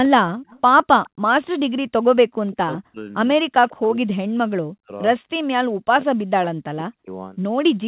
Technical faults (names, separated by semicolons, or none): echo leak; speech suppressed in double talk